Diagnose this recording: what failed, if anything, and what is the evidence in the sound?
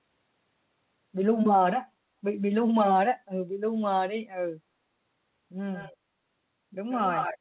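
Echo leak in call processing, likely uncancelled loudspeaker pickup: delayed copies at 5.73–5.95 s (faint, about 20 dB down) and 6.91–7.38 s (nearly speech level), duplicate harmonics offset 134 ms.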